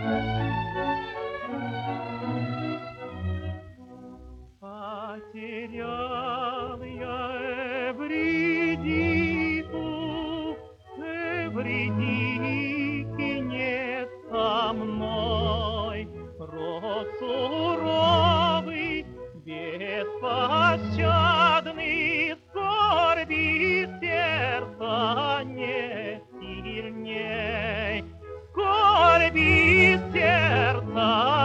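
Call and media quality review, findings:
No audible faults found.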